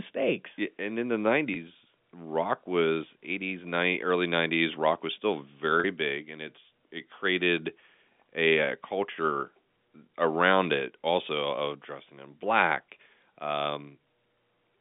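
Speech over what sounds like a normal G.711 phone line, band-limited to roughly 200 Hz to 3.6 kHz, with two short dropouts from packet loss with pitch repetition. The first, at 1.54 to 1.56 s right after "and in the", bridges about 20 ms. The second, at 5.80 to 5.84 s after "rock was still", covers about 40 ms, which fits two lost 20 ms frames. Each time, the receiver loops the last pitch cycle, so you get a brief held, buzzy note before "rock was" and "big and it's it" come back in.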